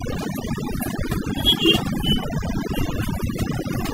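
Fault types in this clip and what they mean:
Overdone noise removal: aggressive denoising runs throughout, leaving a near-silent background with twinkling specks, unlike plain gating, which mutes whole passages while the speech itself stays full.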